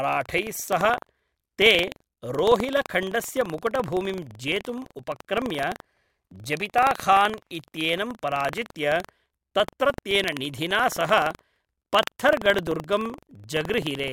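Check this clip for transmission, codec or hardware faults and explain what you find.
One hardware-path fault runs through the whole speech clip. Buffer tearing: writer and reader pointers have slipped, so a small slice of each buffer replays audio about a tenth of a second old between hard joins, heard as a 23.4 Hz robotic rattle, which fits a 2048-sample buffer.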